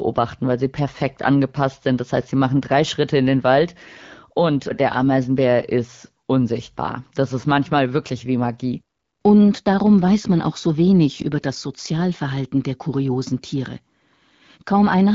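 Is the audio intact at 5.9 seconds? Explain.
Yes, at 5.9 seconds the speech is intact, with no fault at that moment.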